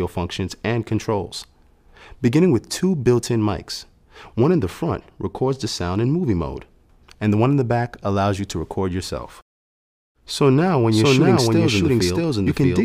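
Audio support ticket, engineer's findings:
Doubled audio track from 10.92 s to end. A full-band second copy at roughly equal level trails the original by around 0.7 s, starting abruptly with no decay. The waveform shows repeated envelopes and the spectrogram shows identical patterns offset in time. Likely a slower duplicate capture path or misaligned edit.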